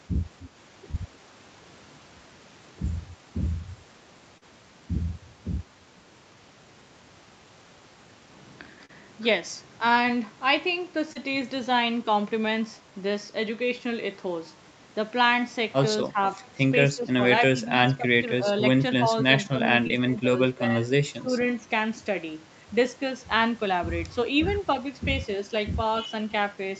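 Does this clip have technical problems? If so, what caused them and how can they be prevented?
Yes, two kinds of fault. There's short concealed packet loss at 0.91, 4.4, 8.9, 11.1 and 19.9 s: 20 to 40 ms of audio arrived too late, so the receiver stretched the previous sound over each gap and blended back, leaving quick smears or wobbles. A steadier network path, or a slightly deeper jitter buffer, would prevent this.

There's also speech suppressed in double talk, heard as dips of about 5 to 15 dB at 16.08–16.21, 16.94–17.19, 17.54–18.46, 19.02–19.10, 19.50–19.60, 20.03–20.84 and 21.20–21.31 s. It's likely the echo canceller mistook overlapping talk for echo and pulled everything down. A headset on the loudspeaker side would keep echo out so the canceller doesn't clamp.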